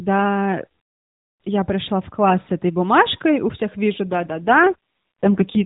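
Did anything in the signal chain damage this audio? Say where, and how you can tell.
Yes. From 4.12 s to the end of the speech, the voice turns rougher and more synthetic, with no gap and no change in bandwidth from the narrowband AMR-NB mobile codec. This is an AMR rate drop at the network stage, consistent with the codec falling from 12.2 to 5.9 kbps.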